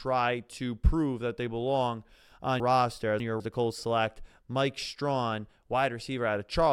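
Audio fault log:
2.6–3.4 s, chunks out of order: just after "that they belong on", one 200 ms chunk plays three chunks late, after the audio meant to follow it. Nothing is missing, but the sequence is scrambled, giving a jumbled stretch with three hard joins.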